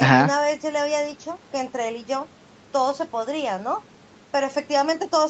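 No technical faults can be heard in this speech recording.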